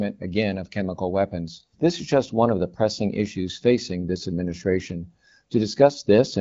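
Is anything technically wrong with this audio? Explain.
No, nothing technically wrong can be heard here.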